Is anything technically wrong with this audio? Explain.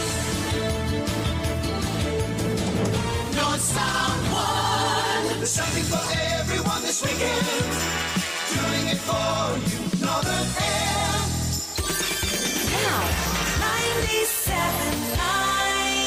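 No, the signal shows no technical faults at any point in the recording.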